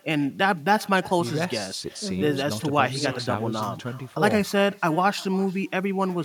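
Echo with no canceller runs throughout the recording. The far end is playing the call over a loudspeaker, and its microphone is picking that playback up and sending it straight back, with nothing in the chain removing it. Every phrase is therefore trailed, roughly a third of a second later, by a faint repeat about 24 dB below the original speech, sounding thinner than the direct voice.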